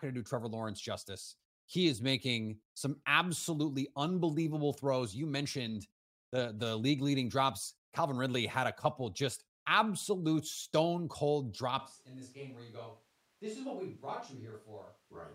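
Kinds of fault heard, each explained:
Switch to a distant microphone: from 11.79 s, after "just absolute stone cold", the speech abruptly turns hollow, roomy and bass-thin, about 10 dB quieter, with room noise near 30 dB below it, likely the close mic dropping out. Unlike added reverb, level and noise shift together.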